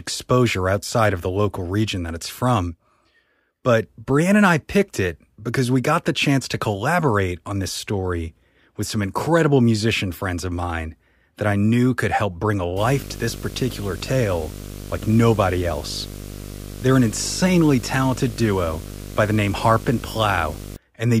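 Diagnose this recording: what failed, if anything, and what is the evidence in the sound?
From 12.76 s, just after "could help bring a", to 20.76 s, a 50 Hz buzz with hash above it and a 15.6 kHz whine sits roughly 10 dB under the speech. This is video or display buzz in the analogue wiring: a screen or video cable leaking its field rate and line scan into the audio.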